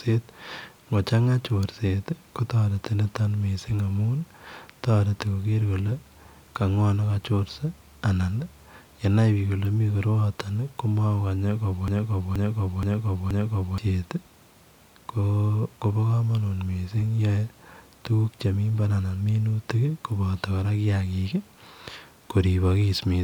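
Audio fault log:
11.88–13.78 s broken-record loop: a 0.48 s speech fragment repeats identically four times, likely from a stalled stream; unlike echo, repeats don't fade and the intervening speech is lost.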